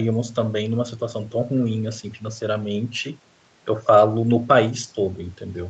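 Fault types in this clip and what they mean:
No faults can be heard anywhere in the speech. The top end stops at 8 kHz, which fits a normally working call path with a wideband Opus codec.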